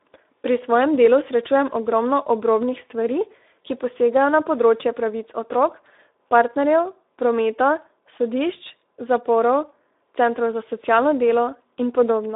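From the start the whole clip carries Speex codec damage. The sound is hoarse and grainy, with the band confined to roughly 300 Hz to 3.7 kHz and nothing above 3.8 kHz. Starved excitation bits give that rough texture, which fits a low setting near 11 kbps.

From 6.42 to 8.44 s a loudspeaker feedback squeal comes in. The mic is catching its own speaker, and the loop runs away at 5.3 kHz. It swells over roughly two seconds into a piercing tone that sits well above the speech.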